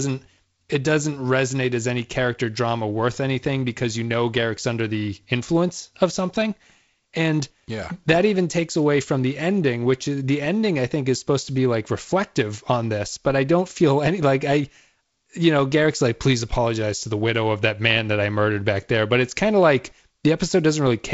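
Nothing here counts as a fault: the speech comes over G.722 wideband telephone coding at what sounds like 48 kbit/s, with the usual light coding texture and nothing above about 7.7 kHz, and that's just how that path sounds.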